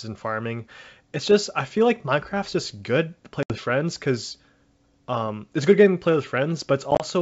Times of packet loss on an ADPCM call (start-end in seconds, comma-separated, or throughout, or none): 3.43-3.55, 6.91-7.04